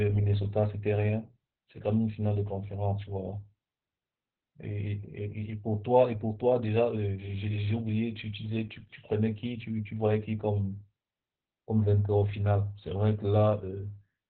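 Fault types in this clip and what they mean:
Opus voice compression: the speech was run through Opus's SILK linear-prediction coder at a very low rate, consistent with about 8 kbps, which forces it into narrowband operation and coarse coding of the excitation signal. Everything above roughly 4 kHz is gone, so the speech sounds muffled and boxed-in, like a telephone line, and the starved excitation coding leaves a hoarse, buzzy, slightly robotic quality across the whole clip.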